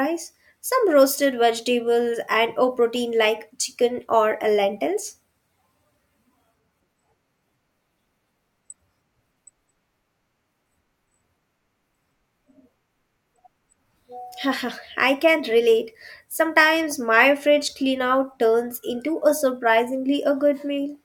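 No technical faults can be heard anywhere in the speech recording.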